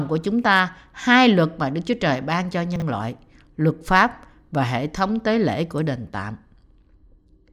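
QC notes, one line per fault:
2.76–2.82 s, chunks out of order: a 20 ms chunk plays two chunks late, jumbling the speech; the waveform shows three hard joins, seen as vertical spectrogram streaks.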